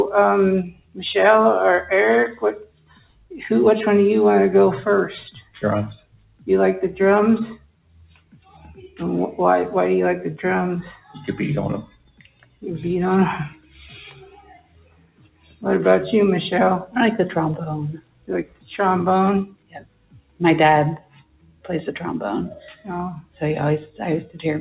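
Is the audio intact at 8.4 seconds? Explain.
No. At 8.4 seconds the audio sits inside a stretch of sound cut by the noise suppressor, running from 7.55 to 9.0 s. The suppressor judged this material to be noise and turned it down by as much as about 19 dB at its deepest, so held or fading parts sink and their decay is clipped short while any sharp onsets poke through. On a waveform the envelope visibly caves in across those 1.45 s; on a spectrogram the energy thins out, with sustained bands fading early.

That dip sits within a broader problem: a noise suppressor applied to music or sounds, left on for the whole clip. Built for speech, it treats steady tones, ambience and reverb tails as noise, pushing level up and down over a swing of roughly 20 dB. The result around 8.4 s is a pumping, fluttery, thinned quality. On a waveform the envelope breathes unevenly. On a spectrogram tails end abruptly and sustained partials look patchy, all beneath the 4 kHz ceiling of the call codec.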